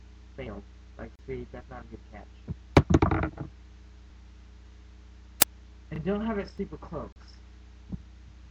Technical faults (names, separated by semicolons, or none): gap at a join of encoded pieces; audio missing between chunks; uninitialised buffer